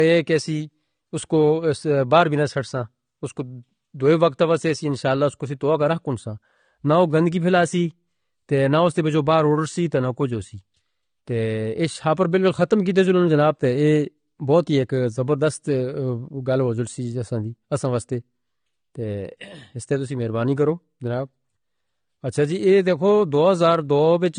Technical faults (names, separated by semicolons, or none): low-bitrate audio saved at a high bitrate